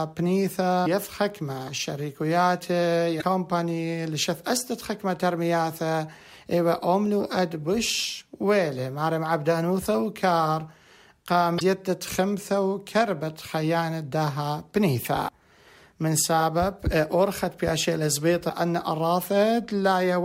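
Five short bursts of damaged data in a compressed stream occur, at 0.82, 3.18, 11.56, 15.24 and 18.46 s. Each lasts about 45 to 55 ms. At these points the compressed bytes were wrong or missing. The decoder misread those frames, lost its lock on the stream, and had to hunt for the next valid frame header. Each event sounds like a brief chirp, squawk, click or short hole cutting through the sound.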